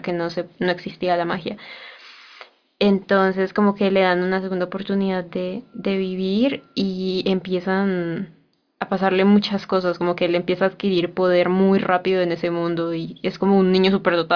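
No technical faults can be heard anywhere in the speech. Nothing in the recording needs a timestamp or a closer look.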